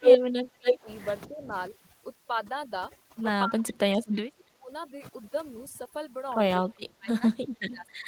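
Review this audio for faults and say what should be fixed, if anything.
The voice repeatedly sinks or breaks into fragments, as if someone were riding the fader down whenever the far end speaks. This happens from 0.00 to 0.88 s, 1.27 to 1.53 s, 3.45 to 3.81 s, 4.08 to 4.70 s, and from 6.67 s to the end. The deepest dips reach about 25 dB, though the one at 1.27 s is shallower at about 10 dB. This is likely speech suppressed in double talk: when both sides talk at once, the echo canceller can't tell this talker from the returning loudspeaker signal and turns everything down. Tuning the canceller's double-talk detection to be less aggressive, or using a headset at this end, would prevent it.

A delayed copy of the voice trails the live sound at 0.02 to 0.18 s (279 ms behind) and 0.64 to 0.74 s (281 ms behind). In both places the copy is as loud as or louder than the direct speech. A faint, much quieter scrap follows at 3.67 to 3.74 s, 289 ms behind. 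This is likely echo leak: a loudspeaker on the far side feeds its microphone, and that side's echo canceller lets part of the signal return. Fixing the far end's echo cancellation, or replacing its speaker with headphones, would stop it.

From 1.68 s to the end, quiet parts of the voice are smeared away. The background collapses to near silence scattered with twinkling specks. This is overdone noise removal. The room noise sits about 10 dB below the speech, and the suppressor cuts individual frequency bands hard whenever they fall near its noise estimate, taking soft speech detail along with the noise. Setting the noise reduction to a gentler strength, or reducing the room noise at the microphone, would avoid it.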